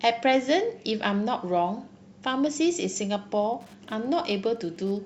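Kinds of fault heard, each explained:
Wi-Fi interference: a nearby Wi-Fi radio's beacon gets rectified by the circuit, so from 3.40 s on you hear faint ticking every 102.4 ms, well below the speech.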